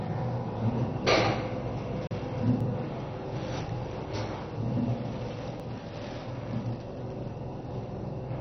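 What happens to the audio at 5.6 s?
At 5.60 s the sound jumps abruptly: a sliver of a few milliseconds is missing and the two sides are butted together with no gap. That points to audio missing between chunks, likely a 3 s recording chunk closing and the next opening. Unlike a dropout, no silence is inserted; the material simply skips forward.

Running through that moment and the whole clip is MP2 compression. Nothing reaches above 6.1 kHz, so the audio sounds dull, with a gurgling, granular roughness. That points to heavy MPEG Layer II coding at a very low rate, around 32 kbps, which likely switched off the upper sub-bands. A plain low-pass filter would sound dull but clean, while here the remaining bands flicker and are coarsely quantised.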